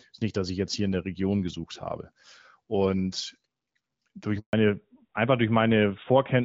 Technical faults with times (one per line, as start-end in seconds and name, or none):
4.39-4.53 handover gap
4.53-6.45 fallback to narrowband